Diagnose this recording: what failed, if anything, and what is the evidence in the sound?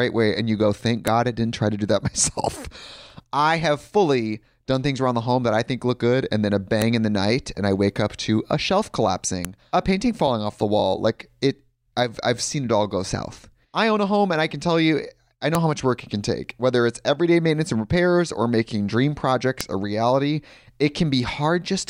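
The failure sits in storage and file assembly: the speech was stitched together from separate WAV pieces without stripping each piece's header, so the file header played as audio. Those few dozen header bytes get read as sample values, producing a sharp, loud click at each join regardless of the speech around it. Snaps land at 1.07 s, between "and you go thank" and "I didn't try to"; at 6.82 s, after "good and then a"; at 9.45 s, after "up to a shelf"; and at 15.55 s and 19.61 s.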